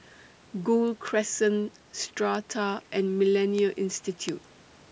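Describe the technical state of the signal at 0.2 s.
At 0.2 s the speech signal is intact, with only the ordinary call microphone processing present, which trims the lowest bass and leaves nothing above 8 kHz.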